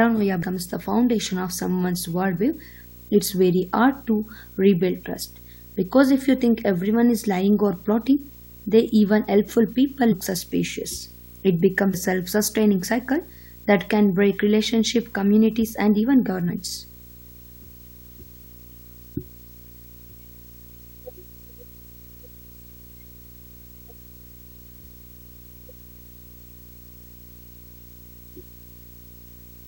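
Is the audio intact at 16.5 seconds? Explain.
No. At 16.48 s the speech jumps ahead, losing about a tenth of a second. This is compressed frames skipped: a few frames were never decoded, so playback resumes later. Under that moment, as throughout, runs a video or display buzz: a 59.94 Hz field-rate hum with hash and a 15.7 kHz line tone, roughly 25 dB below the speech, from a screen or video cable coupling into the audio.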